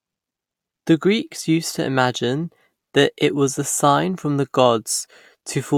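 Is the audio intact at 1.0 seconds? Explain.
Yes, the audio is intact at 1.0 seconds, with no dropout, distortion or other fault audible at that point.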